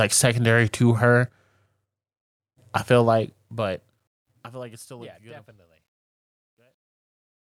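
Speech that fades out from around 3 s turns grainy as it drops, starting at 3.02 s just after "I feel" and running to the end at 7.56 s. From 5.33 s onward the tail is at its worst, gritty instead of thinning away cleanly. That is truncation distortion on a fade. The fade's gain stage keeps too few bits, which fits a 12-bit stage, and adds no dither, so the quietest stretch collapses into a few coarse steps.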